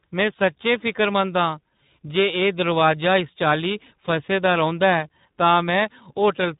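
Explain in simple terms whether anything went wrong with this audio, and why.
Something did go wrong, and it lasts the whole clip: tandem speech coding. The call passed through several phone systems in a row, and at each handover the speech was unpacked and squeezed again in a different format. Two of those squeezes were proper speech codecs, one after the other, the second working on damage the first already did. That's why the voice sounds rough, warbly and muffled, with nothing above about 3.8 kHz.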